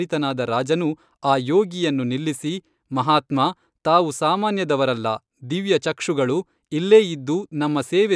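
No technical faults can be heard anywhere in the speech. There is nothing to place on a timeline or flag for closer listening.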